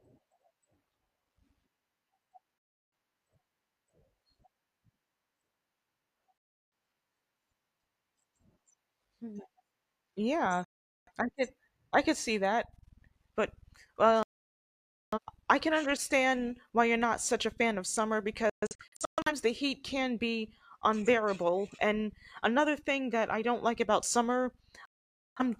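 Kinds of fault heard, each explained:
Digital broadcast dropout: the speech drops to silence six times, once as scattered short holes, because the receiver muted whenever frames went missing or failed their checks.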